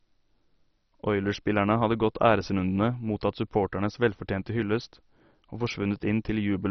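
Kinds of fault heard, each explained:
MP2 compression: the speech sounds dull and gurgling, with granular, coarsely quantised distortion and nothing above about 6.1 kHz, which fits a very low bitrate near 32 kbps. This is likely Layer II coding starving its sub-bands of bits, switching upper bands off.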